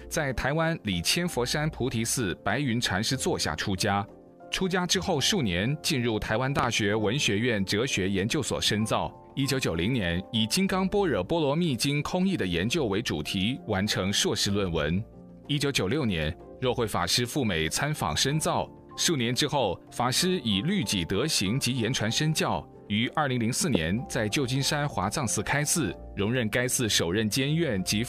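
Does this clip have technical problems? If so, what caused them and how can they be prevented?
Yes: loud pops, a double at 6.59–6.66 s and one at 23.75–23.77 s, jumping well above the sound that continues beneath, unlike a dropout's gap. They are likely voltage spikes from a plug, switch or static. Secure connectors and avoid switching equipment while recording.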